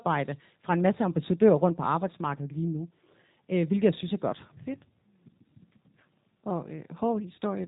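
From start to end the speech carries G.729 codec damage, plainly audible throughout. Nothing passes above about 3.8 kHz, and the voice sounds slightly rough and synthetic because it is rebuilt from a vocal tract filter, a pitch predictor and a few pulses per 10 ms frame, a texture that fits 8 kbit/s G.729A. A simple low-pass filter would dull the top without that buzzy, rebuilt quality.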